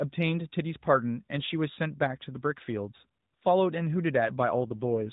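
Right at the end, from 4.58 s, there's an AMR rate drop: the narrowband mobile speech turns rougher and more synthetic with no gap. That fits a fall from 12.2 to 5.9 kbps on a weak link.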